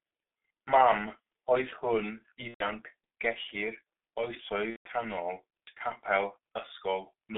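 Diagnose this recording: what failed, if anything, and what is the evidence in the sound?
At the codec stage, the speech has passed through G.723.1, and the damage is heavy throughout. The sound is muffled and hoarse, and consonants are smeared. On a spectrogram, energy stops sharply at about 3.6 kHz and thins below 300 Hz, a telephone-line band. Formant tracks step in coarse blocks, because the codec's vocal model updates only once per 30 ms frame. That low update rate and the rough texture fit a 6.3 kbit/s mode.

At the network stage, VoIP packet loss concealed by the speech codec appears at 2.48–2.68 s and 4.70–4.89 s. During each gap the sound is stretched into a fading extrapolation instead of continuing. On a spectrogram, the harmonics run flat and unchanging, as the decoder repeats its last pitch and filter. In the waveform, the envelope fades over the first two lost frames and then goes silent, within gaps of about 120 ms and 150 ms, which fits four and five lost 30 ms frames. 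After each gap, the level takes a moment to recover.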